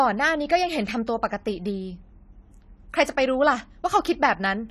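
Throughout the speech, an encoder running short of bits, likely AAC compression in its AAC-LC form at a rate near 32 kbps, has coarsened the spectrum and cut everything above 14.1 kHz. The damage is plainly audible as dull, smeared sound with a fizzy, warbling texture.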